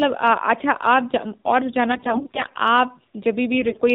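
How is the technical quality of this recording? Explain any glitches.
The technical quality is poor. The whole clip carries plainly audible mobile-codec coloration, and two stretches break up further.

The AMR narrowband mobile codec is present from start to finish, and its damage is plainly audible. Nothing above 4 kHz survives, so the speech sounds thin and muffled. The codec rebuilds the voice from a vocal-tract model fed by a few pulses per short subframe. At a low bit budget, which fits the 7.4 kbps mode, those pulses are sparse. That gives the voice a buzzy, synthetic edge.

AMR bit errors hit from 1.92 to 2.58 s and again from 3.61 to 3.81 s. On a weak link, some of the less-protected bits in each frame arrived flipped, roughly 7 percent of them. The checksum on the critical bits still passed, so the frames were decoded anyway. Excitation pulses landed in wrong positions, and fine gain and spectral values drifted. 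Pitch and loudness hold roughly steady, but the voice turns hoarse, scratchy and gargly during both stretches.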